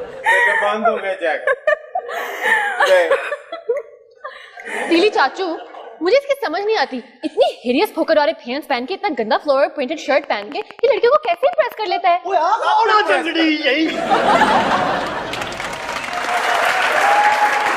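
From 10.24 to 11.73 s a train of clicks rides over the audio: a regular ticking at about 10.8 clicks per second, some fifteen in all, each much the same in shape and peaking a few decibels above the surrounding sound. The likely cause is interference from nearby equipment or a faulty connection or power supply. On a spectrogram it shows as a comb of evenly spaced thin vertical lines spanning the band; the waveform shows matching narrow spikes.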